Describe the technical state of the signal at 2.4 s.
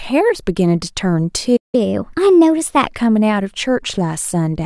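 At 2.4 s the signal is inside a catch-up at higher speed running from 1.75 to 2.87 s. After a stall, the player resamples its backlog to play at 1.15 times normal rate, so the speech runs faster and about two semitones sharp until it returns to normal.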